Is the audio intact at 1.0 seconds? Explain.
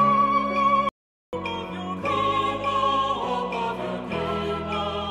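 No. An audio dropout to silence runs from 0.89 to 1.33 s, so 1.0 s falls inside a gap of about 441 ms where the signal is replaced by silence. The input was likely lost briefly, through a disconnected device, failed link or accidental mute, while recording carried on. The sound cuts off abruptly, leaves dead silence with no room tone, then resumes mid-flow, and whatever occurred in that span is gone.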